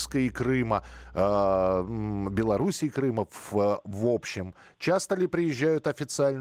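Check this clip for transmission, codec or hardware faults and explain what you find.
One fault stands out: mains hum from the start of the speech to about 2.62 s. A ground loop or nearby transformer is feeding the 60 Hz power line into the signal path, laying a steady low tone with a few low harmonics under the speech, roughly 15 dB below it. Unlike handling noise or wind rumble, it holds one fixed pitch and level throughout, then stops at about 2.62 s. The Opus compression is light.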